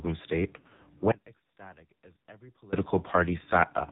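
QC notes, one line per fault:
Throughout: AMR narrowband mobile codec. Everything above 4 kHz is gone, so the speech sounds like a phone call, and the heavy low-bitrate damage gives it a buzzy, synthetic edge. That fits AMR-NB at around 5.9 kbps: the decoder rebuilds the voice from a vocal-tract model driven by only a few pulses per 5 ms subframe, and at this rate there aren't many bits to spend on those pulses, so the result sounds processed.
0.60–0.83 s: lost AMR speech frames. The speech warbles and dips in scattered spots across about 200 ms, adding up to roughly 140 ms missing, which fits around seven dropped 20 ms frames. The longest unbroken run is only 60 ms. For each missing frame the decoder reuses the last good pitch and vocal-tract settings at falling gain, so you get a smeared, wobbly stretch rather than clean silence.
1.12–2.73 s: audio dropout to a faint residue. The speech cuts out abruptly for about 1.6 s and comes back just as suddenly, which is nothing like a natural pause or a fade. 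What's left in the gap is a faint trace of sound, roughly 25 dB below normal level. The likely cause is the wanted signal being lost upstream while the path after the break stayed live, so a weak leak still gets through.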